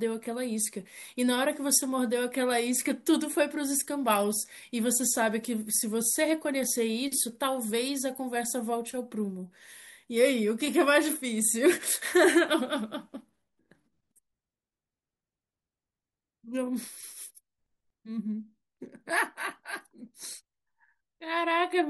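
Speech with no audible faults.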